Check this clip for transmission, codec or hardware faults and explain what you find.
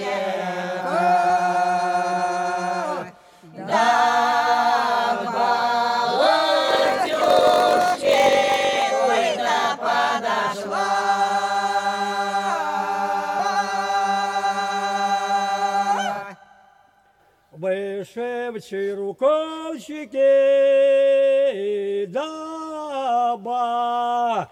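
Two faults can be heard.

From 6.66 to 8.82 s, a 46.9 Hz buzz runs under the sound, which plays at 0.938 of normal speed with its timbre unchanged. This is a block size mismatch (padded): one stage writes blocks shorter than the next stage reads, and that stage fills the rest with zeros. The sound fits a reader taking 1024-sample blocks.

At 13.39 s the sound jumps ahead by about a fifth of a second. This is compressed frames skipped: several 32 ms frames were dropped.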